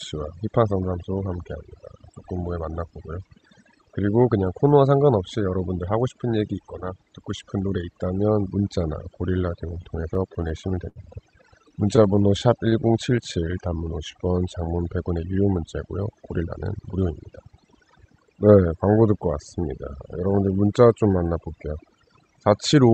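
Overdone noise removal affects the whole recording. The suppressor was set too hard. It pushes down individual frequency bands whenever they sit near its noise estimate, and the softer parts of the speech go with them. The background drops and breaks up into small twinkling specks. It passes through a call path whose high end stops around 8 kHz, which fits a wideband Opus setting.

Repeated stalls (stutter) begin at 9.67 s and run to 10.99 s. Packets arrived late, so the jitter buffer kept running dry. There are thirteen short gaps. The receiver bridged each one by extending the last sound, about 203 ms in total, roughly 15% of that stretch. The longest gap is 70 ms. Nothing is lost, but the speech drags and catches. A second, milder run follows from 11.50 s to 12.75 s. It has eleven gaps, none longer than 18 ms, and about 113 ms is filled.

Jitter buffer slow-down starts at 12.39 s, overlapping the end of that second run, and lasts until 14.50 s. 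The buffer was low, so the receiver repeated single pitch periods and slices of pauses to rebuild its reserve. That adds about 200 ms. Speech plays at about 91% speed with its pitch unchanged. Sounds stretch out, and a slight warble can creep in.

Jitter buffer speed-up runs from 16.27 s to 18.61 s. Too much audio had piled up in the buffer. The receiver cut out short pieces, one or a few pitch periods each, to bring the delay down. Roughly a third of a second is dropped in total. Speech runs at about 113% speed at the same pitch and sounds hurried.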